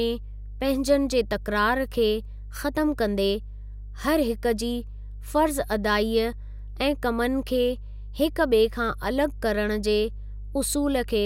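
Right from the start and all the way through, there's mains hum sitting under the speech: a steady 50 Hz drone, roughly 15 dB below the voice, so it's pretty hard to miss. That's the power line leaking into the signal, most likely through a ground loop or a nearby transformer.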